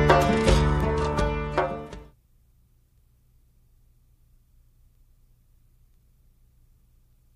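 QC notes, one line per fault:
0.21–7.32 s: word clock ticks, some forty brief clicks recurring about every 0.2 s. The receiving clock free-runs against the sender's, so each slip misreads samples and drops or repeats one, which fits a mismatch of around 100 ppm.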